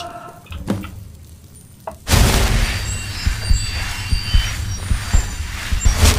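No technical faults can be heard anywhere in the audio.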